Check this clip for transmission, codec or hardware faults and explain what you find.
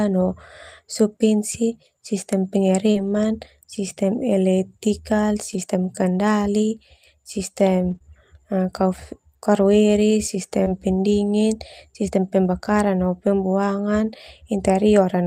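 One transmission fault appears in this speech. Between 1.53 and 10.68 s there are scattered short gaps: about three brief packet losses, each concealed by stretching the preceding sound. They cause quick ticks or smears that show on a spectrogram as thin, flat-smeared slivers.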